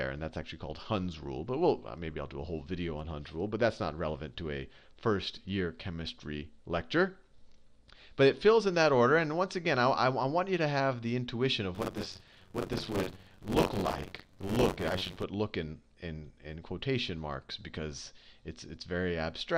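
From start to finish the sound is dull and muffled, with a gurgling, granular roughness. The upper range seems to switch on and off, and what remains sounds coarse. This points to MP2 compression as the likely cause, at a bitrate somewhere near 80 kbps. Layer II divides the signal into 32 equal sub-bands and shares out a limited bit budget, so upper bands drop out entirely and the surviving bands are coarsely quantised. Unlike a plain low-pass filter, the loss flickers and brings a watery grain with it.

From 11.74 to 15.23 s a steady robotic buzz at 93.8 Hz sits on the sound, and it is present only while there is signal. This is buffer tearing. The writer and reader of the playback ring buffer have drifted so that they cross in every period, which fits a 512-sample buffer. Roughly a third of each period replays audio from about 40 ms earlier, with hard joins on both sides. A dropout would leave gaps, but this fault produces a regular rattle instead.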